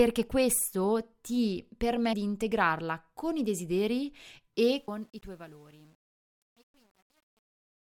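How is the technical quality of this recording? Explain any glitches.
The recording has two audible faults: short skips in the speech and a gritty quality during the closing fade.

At 2.13 s, between "questo ti" and "di integrarla con i", and again at 4.88 s, the speech jumps forward with no gap, dropping roughly a third of a second each time. This is audio missing between chunks, likely from a recorder working in blocks of about 3 seconds that lost a slice at each handover before splicing the sides together.

From 4.72 s, just after "integrarla con i desideri", the fade-out that runs to the end turns grainy. From 5.12 s onward the distortion is at its worst. This is truncation distortion on a fade. The fade was computed at too coarse a resolution, about 9 bits, and without dither, so the quiet tail collapses into a few crude steps.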